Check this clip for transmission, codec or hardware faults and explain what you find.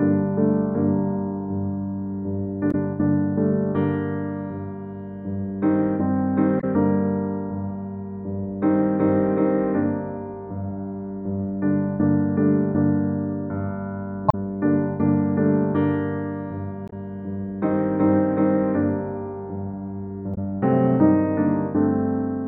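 The clip has one recurring fault, damaged data in a compressed stream, at five points: 2.71–2.75 s, 6.59–6.64 s, 14.28–14.35 s, 16.88–16.93 s and 20.34–20.38 s. At each, corrupted bytes in the coded stream make the decoder misread or discard frames, lose sync and hunt for the next valid frame header. For roughly 40 to 70 ms the sound is replaced by a brief chirp, squawk, click or short hole before normal decoding resumes.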